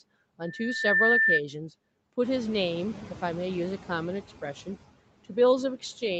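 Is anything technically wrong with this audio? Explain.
Yes, two things stand out in this speech clip.

From about 0.43 to 1.41 s there's a loudspeaker feedback squeal, a steady 1.8 kHz tone that swells over roughly half a second to well above the speech. The mic is picking up its own loudspeaker, and at that frequency the loop gain tops one, so the tone keeps feeding itself.

Noise suppressor artifacts run through the whole clip. The suppressor pulls down whatever bands it reads as steady noise, about 17 dB, frame by frame, so the background drops away between phrases and comes back up under them. That pumping gets more obvious once the room noise picks up around 2 s.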